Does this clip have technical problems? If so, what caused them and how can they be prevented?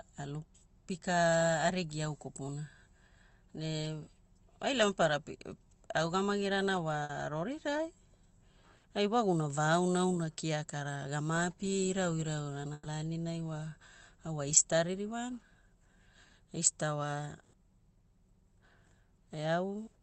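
Yes, a burst of packet loss hits at 7.03–7.12, 8.77–8.86, 12.73–12.88 and 17.41–17.56 s. Each time, the receiver stretches the last sound into a fading buzz or hiss for 60 ms, then 120 ms in the later two, and the real audio there is lost. A steadier network or extra jitter-buffer headroom would prevent it.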